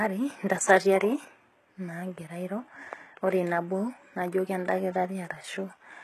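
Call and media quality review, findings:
Gritty, lispy sibilants and metallic, loosely matched treble throughout; nothing above 12.3 kHz. Likely HE-AAC compression: band replication rebuilds the highs from lower bands, pointing to about 16 kbps.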